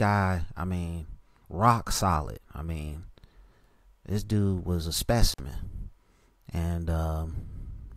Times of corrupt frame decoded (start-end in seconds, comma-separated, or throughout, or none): none